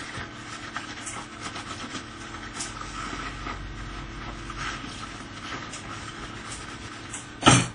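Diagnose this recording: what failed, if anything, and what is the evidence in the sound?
WMA compression, present throughout: a codec-stage fault. The sound has a ringing, washy quality, with a hiss that rises and falls with the signal, and nothing is audible above 10 kHz. That top-end cut and the plainly audible damage point to a low encoding bitrate, about 32 kbps, likely from a WMA-style transform coder. Its long blocks spread quantisation noise across tens of milliseconds, and weak spectral lines are discarded entirely.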